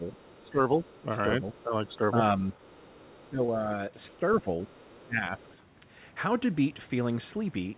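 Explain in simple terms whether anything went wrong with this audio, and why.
A few things went wrong here, all typical of a speakerphone call where both people talk over each other.

Speech suppressed in double talk: around 0.0–0.75 s, 1.41–2.44 s, 3.2–4.49 s and 5.06–5.45 s, the talker's voice dips and thins out in patches. The likely cause is the echo canceller getting confused while both sides spoke at once and turning everything down.

Other side's voice leaking through: faintly, underneath, you can catch a second voice at about 0.07–1.02 s, 1.6–1.96 s, 2.51–3.29 s and 4.08–5.57 s. That's likely the far end playing out of the talker's loudspeaker and not being fully scrubbed from the microphone.

Short concealed packet loss: at 3.46–3.5 s a tiny bit of audio didn't arrive in time, and the receiver papered over the gap by stretching the previous sound. You hear it as a quick smear or blip in the middle of one of the dipped stretches.

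The whole thing also has that narrow phone-line sound, with nothing above 4 kHz, which comes from the G.711 call codec it went through.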